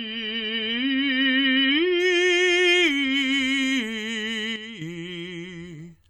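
For the first 2.0 s the music sounds dull and smeared, with nothing above about 5.8 kHz and a swirly, watery quality on sustained parts. Then the treble snaps back and the artefacts fall away at once, with no gap. This is an adaptive stream starting at a low bitrate: the player began on a very lean version to start quickly, which fits something like 24 kbit/s MP3, and stepped up to a fuller one, around 128 kbit/s, once it had measured the connection.

From 4.56 s to 4.81 s the whole sound drops abruptly by about 8 dB, music and background together, then returns to its previous level. The change is instantaneous rather than a fade, as if the level were switched down and back up again. That points to a sudden gain jump, likely a digital gain setting or bit shift applied from one sample to the next with no ramp to smooth the transition.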